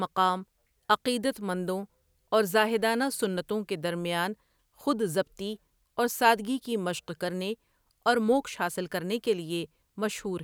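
Nothing goes wrong anywhere in this recording, so there's no technical fault to point to at any moment along the way.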